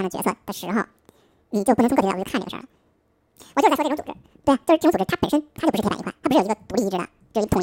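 From start to finish the speech plays at double speed, an octave high, because the audio was read two samples at a time and each pair was treated as one frame.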